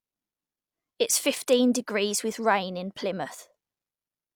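No audible technical faults.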